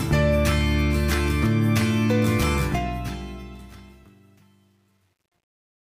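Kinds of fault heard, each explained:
Truncation distortion on a fade: the fade-out starting at about 2.57 s is requantised without dither, so as the level drops the waveform collapses onto a few coarse square steps, which fits a stage keeping only 10 bits. From 3.67 s to the end at 5.91 s the tail turns gritty. A waveform shows staircase steps in the decay. A spectrogram shows broadband harmonic fuzz over the fading content.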